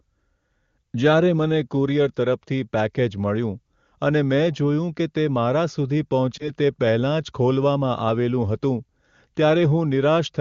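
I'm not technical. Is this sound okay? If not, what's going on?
No. Around 6.38 to 6.51 seconds the speech briefly dips or wobbles, then recovers slightly rough. These are lost AMR speech frames: radio errors corrupted a moment of the call, which sounds like one 20 ms frame, so the HD Voice decoder guessed from the preceding sound.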